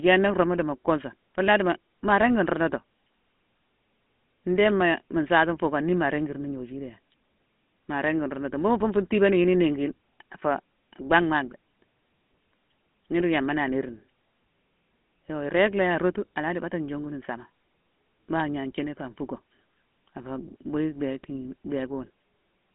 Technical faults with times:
0.00-22.75 GSM full-rate codec

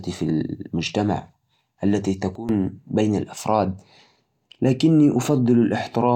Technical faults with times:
2.35-2.49 sudden gain jump

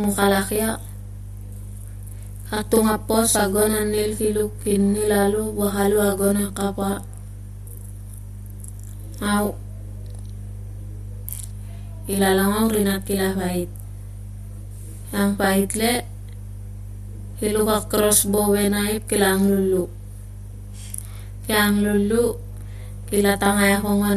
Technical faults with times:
0.00-24.16 mains hum
0.00-24.16 channel delay (doubling)

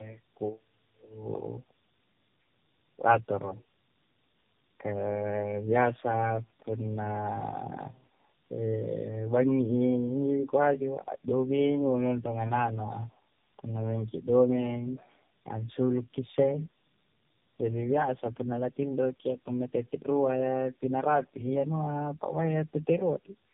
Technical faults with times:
0.00-23.53 tandem speech coding

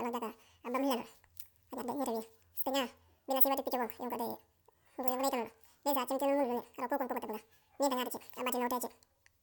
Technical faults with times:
0.00-9.43 audio read two samples at a time (double speed)

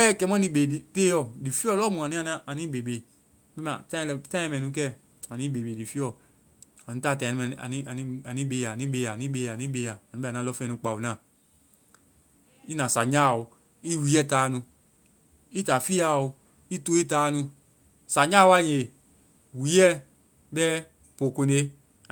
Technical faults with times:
none

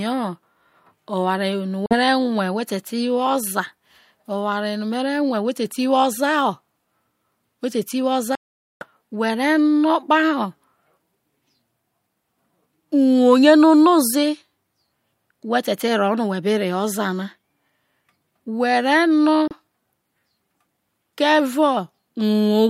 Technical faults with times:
1.86-1.95 Bluetooth dropout
8.35-8.86 Bluetooth dropout
19.48-19.54 Bluetooth dropout

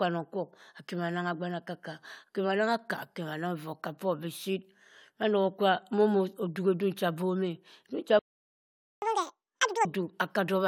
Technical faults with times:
8.19-9.02 playback stall
9.02-9.85 catch-up at higher speed

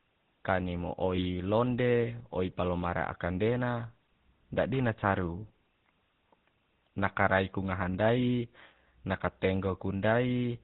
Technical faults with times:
0.00-10.64 GSM full-rate codec
1.16-1.24 lost GSM frames

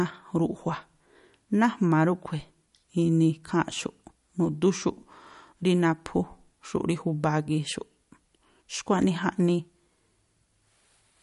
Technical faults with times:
0.00-11.22 MP3 compression

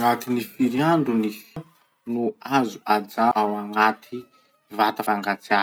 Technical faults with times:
1.56 audio missing between chunks
3.31 audio missing between chunks
5.06 audio missing between chunks

